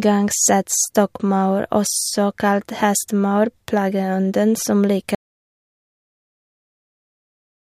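At 5.15 s, just after "kalt hestemaur plageånden som", an audio dropout to silence cuts the speech off mid-flow, likely from a lost input, leaving silence without room tone, unlike a fade, until the end.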